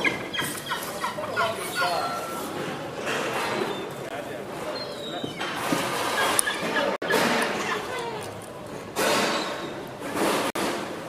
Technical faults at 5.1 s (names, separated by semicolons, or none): none